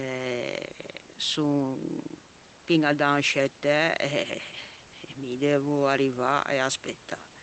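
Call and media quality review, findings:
No faults found in this speech recording.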